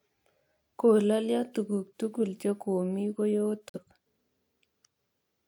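At 3.69 s a corrupt frame muted leaves a 92 ms hole of abrupt silence, which fits a single rejected frame; unlike concealment, nothing fills it, and timing stays intact.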